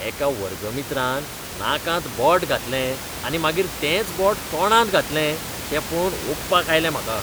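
No technical faults can be heard in this speech recording. Room noise sits in the background about 10 dB below the speech, part of the space the microphone was in rather than a fault of the system.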